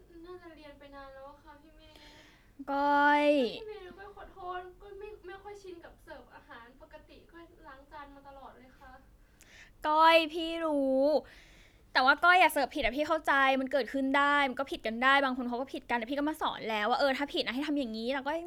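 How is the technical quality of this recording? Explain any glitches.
Listening closely, nothing in the recording stood out as a technical problem, so there are no glitches to explain.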